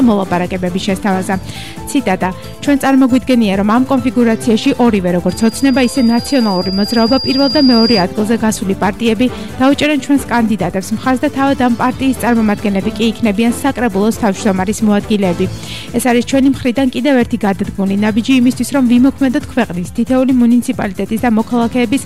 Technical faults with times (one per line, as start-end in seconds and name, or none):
5.29-8.06 loudspeaker feedback squeal